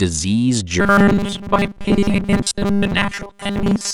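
From 0.8 s to the end, the speech takes on a robotic sound from repeated short buffers: a rigid, metallic buzz at 200 Hz that still roughly follows the syllables. The likely cause is new audio arriving too seldom, so playback fills the gaps by looping the most recent 5 ms fragment, which fits a 5 ms buffer and explains the 200 Hz pitch. Most of the signal in this stretch is repeated material, and the skipped audio is lost.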